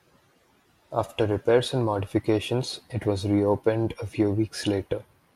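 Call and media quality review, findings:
No findings in this call and media quality review.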